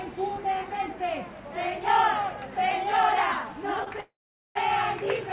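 A recording of everyday sounds, carried over a call link whose narrow band stops at 4 kHz, which fits G.711 mu-law at 64 kbps. At 3.84 to 3.88 s there is a short stall from a late packet. The jitter buffer ran dry, so the last sound was stretched for about 23 ms. Then it resumed from the same point, with nothing lost. From 4.00 to 4.57 s comes a call audio freeze. The sound holds as a fading buzz, then falls to silence for about 440 ms, about 550 ms in all. Delayed packets likely emptied the buffer. Playback then picks up where it stopped, adding a gap rather than dropping audio.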